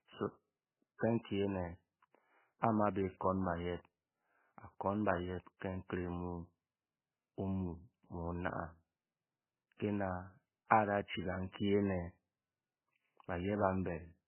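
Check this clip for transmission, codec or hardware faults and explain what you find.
The clip carries one fault, present throughout the speech: likely MP3 compression. Nothing sounds above 3 kHz, and the heavy watery swirl fits a bitrate near 8.6 kbps, starving bits and zeroing weak frequency lines.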